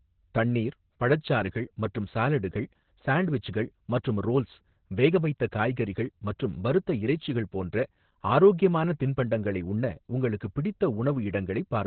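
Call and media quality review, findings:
Opus voice compression, throughout the 0 to 12 s of speech. Band-limited, nothing above 4.3 kHz; muffled, hoarse, slightly robotic timbre. Probable component: encoder in SILK linear-prediction mode at narrowband, heavy damage pointing to roughly 8 kbps. Low bitrate forces narrowband and coarse excitation coding in 20 ms frames, stripping brightness and roughening voicing.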